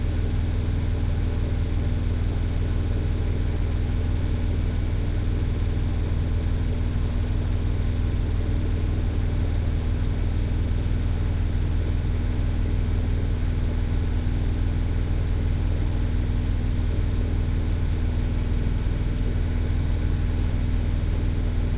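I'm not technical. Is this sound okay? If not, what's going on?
Yes, nothing is wrong here.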